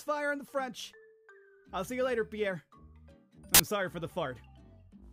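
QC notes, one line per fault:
3.54–3.60 s: file tags played as audio. An embedded picture's compressed bytes are read as samples, giving about 50 ms of very loud white noise with hard edges. It is flat, broadband static with no lean to one side, unlike the rasp that text tags produce or the silence of a dropout.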